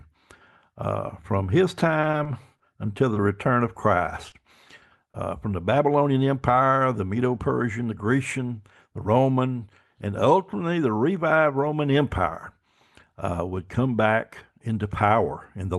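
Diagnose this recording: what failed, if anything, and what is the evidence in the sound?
Network stage, repeated packet loss: five gaps between 1.79 and 2.62 s, after "uh from his", each patched by extending prior sound, leaving choppy speech with pieces missing.

Network and jitter buffer, a short stall from a late packet: the buffer ran dry at 3.14–3.18 s, before "return of", stretching sound about 20 ms with a slight buzz or dip.

Network stage, short concealed packet loss: 20 ms vanished at 4.30–4.34 s and 5.12–5.16 s (before "from the"), filled by continuation, heard as brief smears.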